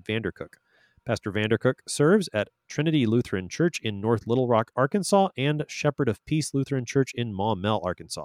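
Nothing in the speech stood out as a technical problem on listening.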